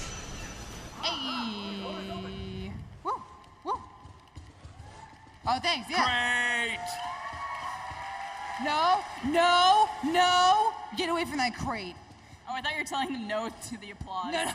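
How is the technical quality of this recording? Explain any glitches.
Nothing in the recording stood out as a technical problem on listening, so there are no glitches to explain.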